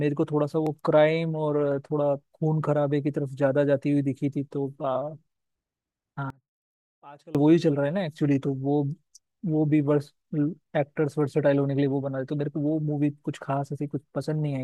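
From 6.30 to 7.35 s the speech falls by about 25 dB to a faint residue, likely one channel inverted, cancelling the shared content when summed to mono.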